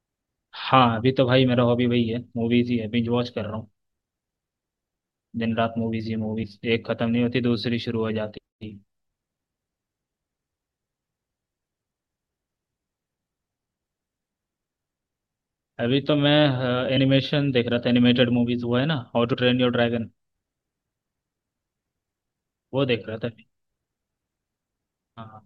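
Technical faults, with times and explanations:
6.42 s, 16.94–16.99 s, 19.33 s, compressed frames skipped: whole coded frames went missing or were rejected as damaged by the decoder, so the speech jumps forward by roughly 70, 20 and 40 ms.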